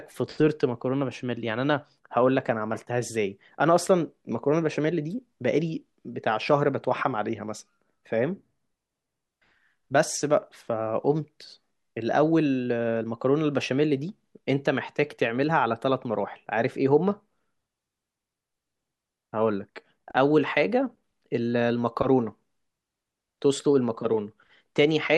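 No technical faults can be heard anywhere in the speech recording.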